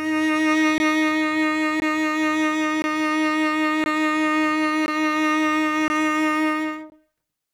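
Gap between chunks in this music, with 20 ms silent holes at 0.78, 1.8, 2.82, 3.84, 4.86, 5.88 and 6.9 s, because silence is inserted between 1 s chunks.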